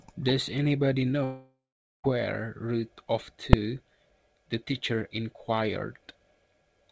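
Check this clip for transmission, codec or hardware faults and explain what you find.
Two faults stand out in this speech clip, heard over a G.722 call path whose audio stops at 8 kHz.

From 1.24 to 2.07 s the sound breaks off: the last sound carries on as a fading buzz, then about 460 ms of near-silence, and speech resumes with roughly 800 ms gone. This is likely a long network dropout, where the receiver concealed missing packets. A short packet loss would be masked almost seamlessly, without the dead stretch.

At 3.53 s a single loud bang comes from invalid numbers at full scale. A calculation produced infinite or invalid values, pinning the output to its limit for about 2.67 ms, which fits a 128-sample block. Because the block is so short, the loud pops that mark its start and end merge into one bang. A clipping overload sounds different: it flattens peaks over a longer stretch and stays tied to the speech level.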